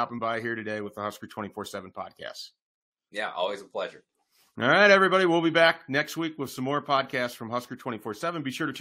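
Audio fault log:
No faults detected in this recording.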